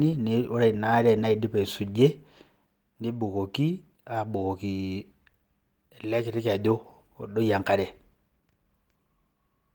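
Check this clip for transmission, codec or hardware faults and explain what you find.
Nothing here sounds like a fault to me; the speech comes through the Opus coding with its full bandwidth intact, so there's nothing to flag.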